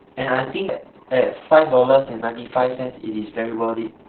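Speech, heavily damaged throughout by Opus voice compression: narrowband SILK coding leaves it muffled, hoarse and slightly robotic, unlike a simple low-pass, which fits a bitrate near 6 kbps.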